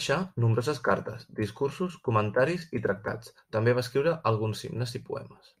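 At 2.84 to 2.86 s the speech briefly jumps forward, the sign of compressed frames skipped. A chunk of the encoded stream never reached the output, and the short skip fits a single 10 ms frame lost. On a waveform the envelope shows a small discontinuity there; a spectrogram shows a thin vertical smudge where harmonics break and resume.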